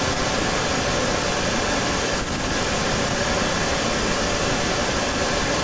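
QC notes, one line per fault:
Throughout, echo leak: there's a second copy of the speech trailing the original by about 147 ms for the whole clip, and it sits about 5 dB louder than the speech, so it smears the phrases into a doubled, slapback sound. Likely cause is a far end on loudspeaker whose echo canceller let its mic pickup slip back into the call. The band-limiting at 8 kHz is just the call path.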